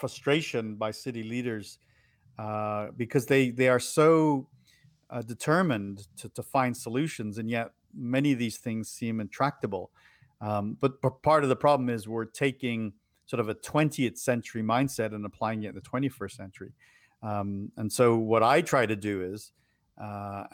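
No technical faults can be heard in this recording.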